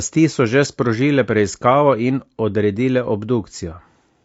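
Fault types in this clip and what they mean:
Low-delay AAC compression: The speech sounds rough and grainy through the whole clip, with a noisy fill between the pitch harmonics and a top band that comes across thin and somewhat synthetic. This is plainly audible and is likely the work of AAC-ELD, the low-delay codec used for video calls. At low bitrates its coarse quantization leaves noise between the harmonics. The degree of damage fits a bitrate around 32 kbps.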